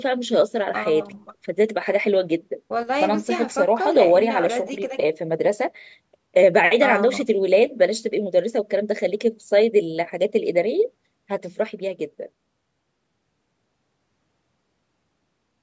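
Listening to this speech recording, nothing technical stood out as a problem; the bass roll-off and the absence of content above 8 kHz fit ordinary call microphone processing.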